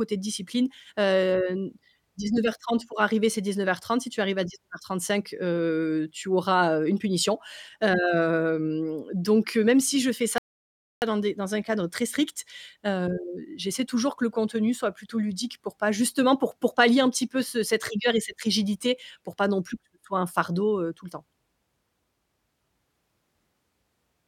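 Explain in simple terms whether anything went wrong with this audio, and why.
At 10.38 s the speech suddenly drops into silence, then picks up at 11.02 s exactly where it left off, with nothing missing. This is a rebuffering stall: the player ran out of downloaded audio and waited for more, adding about 0.64 s of dead air.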